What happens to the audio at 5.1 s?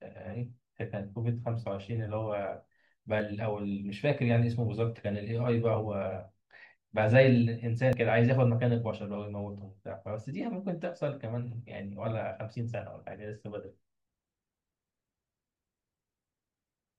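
Nothing goes wrong at 5.1 s; the speech plays through that moment intact, with no dropout, click, distortion or other fault.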